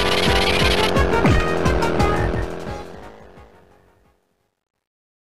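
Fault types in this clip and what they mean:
truncation distortion on a fade: From 2.13 s the fade-out grows gritty, worst from 3.38 s, which fits an 11-bit path, unlike the steady hiss of dithered fades.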